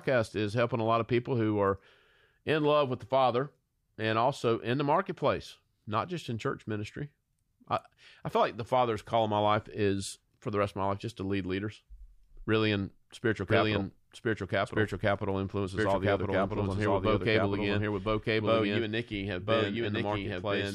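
A doubled audio track enters abruptly at 13.5 s in this speech recording and runs to the end: a second full-band copy trails about one second behind, at roughly equal loudness, with no decay or room colour, most likely from a slower duplicate capture path.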